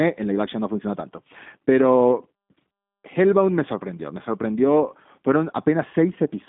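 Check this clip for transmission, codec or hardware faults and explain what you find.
One codec fault runs through the whole speech clip. G.729 codec coding throughout: frame-based pitch-and-pulse modelling that fits an 8 kbit/s codec rebuilds the speech, confining it to roughly 150 Hz–3.6 kHz and leaving it audibly rough and synthetic.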